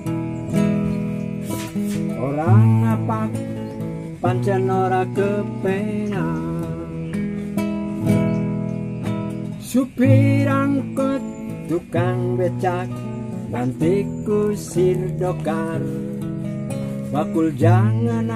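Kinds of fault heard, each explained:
No faults detected; nothing to flag.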